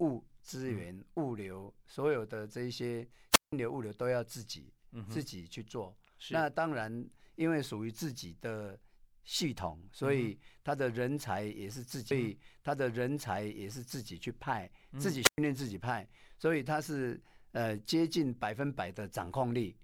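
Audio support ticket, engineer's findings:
Wireless microphone squelch dropout, 3.31–3.53 s and 15.22–15.38 s. Speech hole of about 170 ms, then about 111 ms. Probable component: analogue FM microphone/receiver link. RF fades, receiver squelch mutes output. Hiss rises before each hole, then speech returns. That rise in static is what separates it from a network packet-loss gap, which cuts with no noise lead-in.

Stream segment repeated, 12.1–14.1 s. About 2.0 s of programme plays a second time, small blip at the jump back. Probable component: player fetch/queue logic. Same segment requested or buffered twice. Distinguished from echo or a delay loop: a clean sequential replay, no overlap with the original, no decaying copies.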